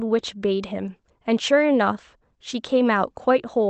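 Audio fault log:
throughout: clock drift between sender and receiver. The sending clock runs roughly 4 percent slow against the receiver, so the jitter buffer keeps draining and must be refilled by stretching the audio. The speech drifts slightly slow and the tempo is a little unsteady. On a waveform, syllable spacing lengthens irregularly. On a spectrogram, which tops out near 8 kHz as fits an Opus call path, pitch harmonics stay level while timing stretches unevenly.
0.01–3.70 s: repeated timing corrections. Across the whole stretch the receiver keeps inserting short repeated or stretched pieces, running at 97 percent speed and adding something like 150 ms in total. Each correction goes the same way, lengthening, at uneven spacing, heard as faint hiccups or a hesitant rhythm. A waveform shows small duplicated cycles spliced into voiced segments. A spectrogram shows brief smeared or doubled frames where harmonic patterns briefly repeat.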